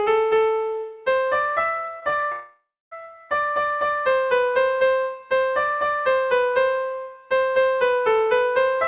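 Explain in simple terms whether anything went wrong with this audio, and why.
Around 2.00 to 2.03 s, 2.09 to 2.14 s and 2.20 to 2.24 s, the sound briefly smears or wobbles. This is short concealed packet loss. Each time, about 20 ms of audio arrived too late, so the receiver patched the gap by continuing the previous sound before blending back in.

From 2.32 to 2.93 s, the sound trails off into a fading buzz or hiss, goes silent for about 0.27 s, then returns with part of it missing. The likely cause is a long network dropout: roughly 0.6 s of audio never arrived, and the receiver filled what it could before giving up.

Throughout, the call line carries nothing above 4 kHz, which gives it the usual narrow telephone sound.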